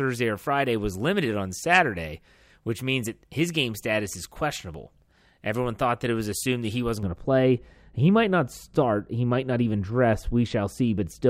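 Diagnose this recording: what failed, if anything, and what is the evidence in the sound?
A de-emphasis filter was applied wrongly in the processing chain from 7.03 s to the end at 11.30 s, cutting treble from audio that needed no correction. The speech turns dull and muffled, with the response sloping smoothly down to about 11 dB below 1 kHz at 10 kHz.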